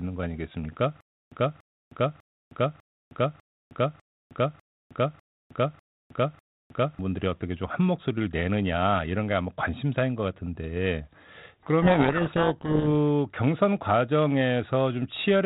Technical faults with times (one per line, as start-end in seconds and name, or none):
1.01-6.99 stutter with silent gaps
11.82-12.87 codec payload misread